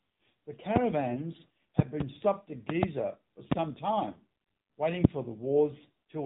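AMR narrowband mobile codec damage runs through the whole speech clip, from the first moment to the last. Everything above 4 kHz is missing, and the voice has the buzzy, synthetic edge that comes when a vocal-tract model rebuilds speech from a few excitation pulses per subframe. The coding damage is plainly audible, which fits the AMR-NB mode at about 7.4 kbps rather than its higher rates.

Loud pops then cut across the sound four times: a single pop at 0.76 to 0.79 s, a double pop between 1.79 and 2.03 s, another pair between 2.70 and 2.86 s, and a single pop at 3.51 to 3.54 s. The first two peak about 20 dB above the speech and the last two about 25 dB. The speech continues underneath each one. The likely cause is a sudden voltage step or pulse from a switch, connector, static discharge or driver glitch, which the downstream circuitry shapes into a sharp pop.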